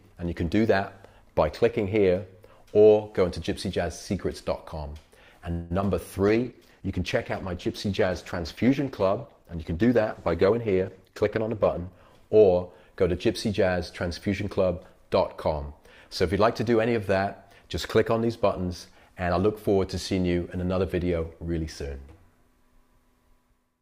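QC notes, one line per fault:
5.51–5.72 s, call audio freeze: the sound stalls for about 0.19 s, with the last fragment held and decaying as a brief fading buzz or hiss rather than dropping to silence. Nothing is lost; the audio resumes exactly where it stopped, so the stall simply inserts a gap and pushes everything after it later by the same 0.19 s. That pattern is most likely packets delayed in transit long enough for the jitter buffer to run dry.
5.80 s, short concealed packet loss: a tiny hole, roughly 20 ms of audio that never arrived in time, patched by the receiver extending the preceding sound for about 10 ms before blending back into real signal. What remains is a quick smear or wobble; whatever was in that slot is gone rather than delayed, so a short transient there can disappear outright.
6.28–11.98 s, call bitrate drop: the encoder rate falls from 64 kbps to 12 kbps and stays at the floor for the full 5.7 s. 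At 12 kbps Opus quantises far more coarsely and trims the upper band, so the sound turns muffled and watery, with dulled high-frequency detail, until the rate comes back up at 11.98 s.
10.49–12.43 s, jitter buffer speed-up: the receiver is draining excess buffered audio, cutting out short pitch-period-length pieces over and over to shed roughly 0.2 s of delay. Playback runs about 9% fast at unchanged pitch, so the passage sounds hurried and its timing compressed. This overlaps the tail of the bitrate drop, so the last 1.5 s of the coarse section is also rushed.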